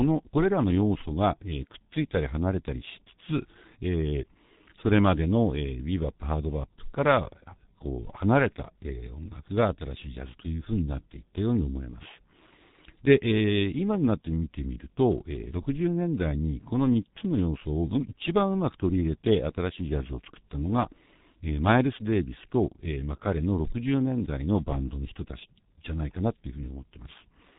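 From start to finish the speech carries heavy G.723.1 codec damage: nothing above 3.8 kHz, so a spectrogram shows a flat ceiling there, with smeared formant bands. Long frames and a slowly updated voice model leave it muffled and hoarse with blurred consonants, which fits a 6.3 kbit/s stream.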